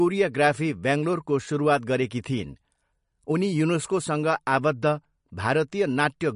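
From start to finish the speech has plainly audible damage of the kind left by heavy MP3 compression, which is the likely cause. The encoder, starved of bits, cuts the treble and drops weaker frequency lines frame by frame, so sibilants turn swirly and watery and consonant attacks smear. A spectrogram shows a flat ceiling with nothing above 10.6 kHz and flickering holes in the upper bands. The damage points to a low bitrate of around 44 kbps.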